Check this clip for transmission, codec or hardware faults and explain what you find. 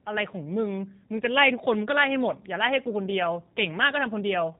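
There's one codec fault, and it runs the whole way through. The speech carries G.729 coding: it's rebuilt from a filter-and-pulse model, which fits 8 kbit/s, so it sounds plainly rough and synthetic, with nothing above 3.8 kHz.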